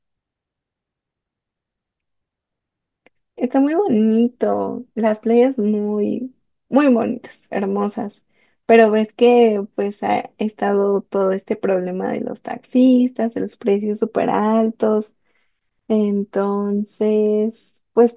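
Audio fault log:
Nothing stood out on listening to this speech recording.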